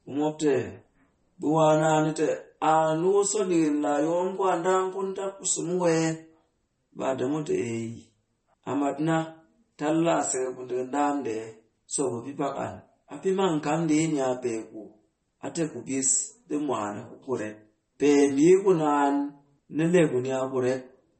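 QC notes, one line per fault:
Throughout, MP3 compression: the speech sounds watery and swirly, with chirpy sibilants and nothing above 8.4 kHz. This is likely a bit-starved MP3 encode, consistent with about 32 kbps, where the encoder cuts the treble and drops weak frequency lines frame by frame.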